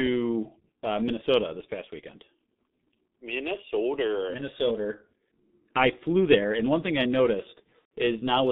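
The whole speech clip carries G.723.1 codec damage, heavy throughout. The audio is confined to roughly 150 Hz to 3.7 kHz, and at 6.3 kbit/s the slowly updated vocal model leaves the voice muffled and hoarse, with consonants smeared across the 30 ms frames.

From 7.79 to 7.90 s, VoIP packet loss concealed by the speech codec takes over. About 120 ms of audio is missing, which points to four lost frames. The decoder repeats its last pitch and filter at falling gain, so the sound stretches into a fading buzzy tone or coloured noise, and the voice stays weakened after packets resume.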